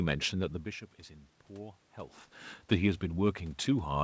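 Nothing in this speech recording points to a technical fault; the level dips and swells around half a second and two seconds in come from the talker shifting relative to the microphone, and the room noise belongs to the recording space.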